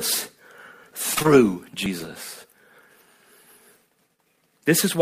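At 0.91 s the speech skips forward: a short piece, about a twentieth of a second, is gone and the audio on either side is butted together with no silence. The same jump recurs at 1.86 s and 2.81 s, close to once a second. That regular spacing points to audio missing between chunks, likely from a recorder or processor working in 1-second chunks and dropping a sliver each time it closes one and opens the next.

From 1.15 to 1.26 s there is short concealed packet loss: three consecutive 20 ms stretches never arrived in time, and the receiver papered over each one by extending the preceding sound, carrying its pitch forward where the speech was voiced and substituting shaped noise where it was not, before blending back into real audio. Across that tenth of a second the speech takes on a brief smeared, wobbling quality rather than a clean gap.

At 2.00 to 2.06 s comes a lost packet rebuilt from error correction, which fits two lost packets recovered from low-bitrate copies carried in the packets that followed them (Opus in-band forward error correction). 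There is no dropout, but for those 40 ms the speech sounds coarser and noisier, since the decoder is playing a reduced-quality stand-in instead of the original frames.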